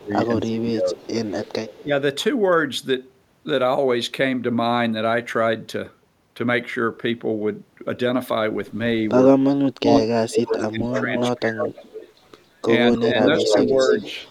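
Speech clip with two recurring faults. Speech is suppressed in double talk from 0.0 to 1.07 s and 1.82 to 1.91 s (dips of about 15 dB), 9.99 to 11.86 s (dipping as deep as about 30 dB) and 12.96 to 13.93 s (about 5 dB). The voice ducks while the far side talks, likely because the echo canceller cannot tell the near talker from loudspeaker echo and attenuates both. An echo leak appears from 0.98 to 1.83 s as a copy delayed 245 ms, about 20 dB under the speech. From 9.84 to 12.38 s and 12.95 to 14.3 s it returns at 293 ms delay, roughly as loud as the speech itself. The probable cause is a loudspeaker pickup that the echo canceller fails to remove.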